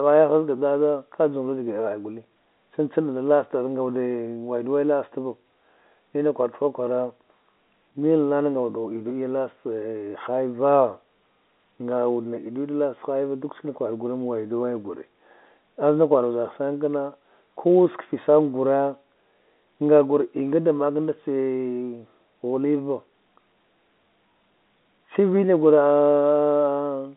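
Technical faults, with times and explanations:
No technical faults are audible: the speech carries the expected sound of G.711 telephone coding, confined to a line band of roughly 200 Hz to 3.6 kHz with nothing above 3.8 kHz, and its companding leaves at most a faint trace.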